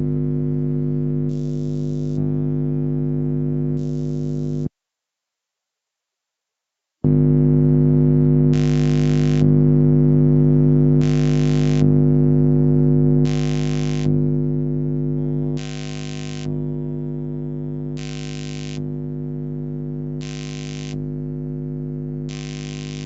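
From start to end, a noise suppressor built for speech stays active on these sounds. It treats steady tones, ambience and reverberant tails as background noise and pulls them down. Onsets mostly pass, then sustained parts and decays sink, with the level swinging by around 10 dB. The result pumps, flutters or thins out. The call path also limits everything to 8 kHz, so nothing is heard above that.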